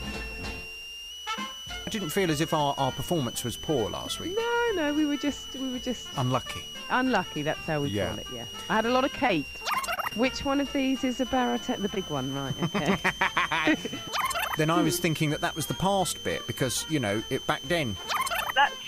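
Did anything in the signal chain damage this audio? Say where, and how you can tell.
Yes. A switching supply whistle runs through the whole clip: a high tone near 3 kHz, wandering between 2.69 and 3.23 kHz, roughly 10 dB below the signal. It enters in the analogue power and wiring stage. Mains hum would sit steadily at low frequencies instead.

Repeated packet loss (robotic sound) damages the network stage from 9.15 to 10.21 s. Eight separate holes, the longest 28 ms, are patched by extending the previous sound, leaving choppy audio with about 100 ms missing. Codec artefacts would not recur as these discrete gaps.

At 11.50 to 11.55 s, a short stall from a late packet holds the sound for 25 ms, then resumes where it left off, with nothing lost. The jitter buffer emptied as network delay rose by 25 ms. Unlike a packet loss, no audio disappears.

A short concealed packet loss follows at 11.95 to 11.98 s. 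About 20 ms never arrived, and a brief synthesized continuation covers the hole, heard as a quick smear or wobble. Unlike the stall, audio is genuinely missing here, not merely delayed.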